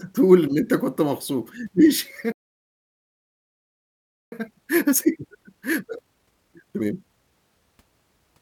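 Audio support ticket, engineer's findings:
Playback stall, 2.32 to 4.32 s: speech cuts off mid-flow for 2 s. Flat line on waveform, blank spectrogram column. Likely an underrun or blocked player thread.

Time-compressed catch-up, 4.32 to 7.32 s: speech hurried at 1.5x, normal pitch. Player cross-fading out small chunks to drain backlog. Spectrogram shows unshifted harmonics, tighter syllable spacing.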